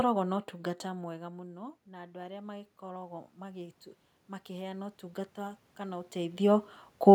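At 0.82 s the automatic gain control starts rising, climbing about 9 dB by 3.85 s after the input level fell by about 16 dB as the talker moved away around half a second in. Voice and room noise swell together over those three seconds. A second automatic gain rise follows from 4.47 s to 6.5 s, adding about 4 dB, with the background lifting alongside the voice.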